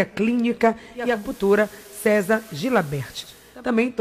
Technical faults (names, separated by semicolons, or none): digital radio blending to analogue